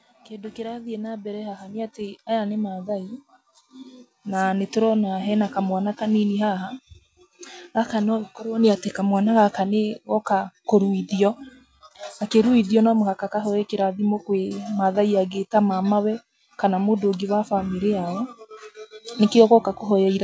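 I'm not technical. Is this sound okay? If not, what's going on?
No, there's automatic gain rising: from about 0.26 to 14.7 seconds, the call's volume control slowly cranks up, so the voice and background noise grow louder together.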